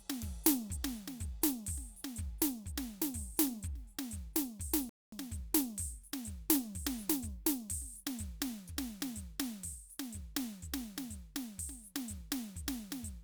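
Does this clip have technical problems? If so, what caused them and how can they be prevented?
Yes. The music contains a rebuffering stall from 4.89 s to 5.12 s. The sound drops to silence for about 230 ms. Then it picks up at exactly the point where it stopped. No music is skipped, but the gap adds that time to the playback. This happens when the player drains its store of downloaded audio and must wait for more data. To prevent it, use a larger playback buffer and a steadier, faster network connection.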